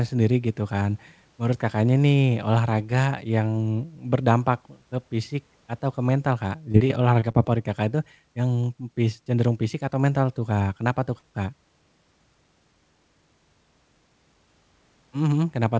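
From 6.72 to 7.36 s the speech turns choppy and robotic: repeated packet loss, five short gaps, the longest 24 ms, each patched by extending the preceding sound.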